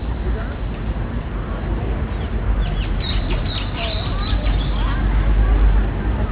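This everyday-sound recording has a gritty, metallic edge on its brighter content from start to finish, with the top end pressed hard against a ceiling near 4 kHz. That is aliasing: the rate was cut, which fits a drop from 44.1 kHz to 8 kHz, with no filter first, so energy above 4 kHz folds back as false tones only about 20 dB below the real sound.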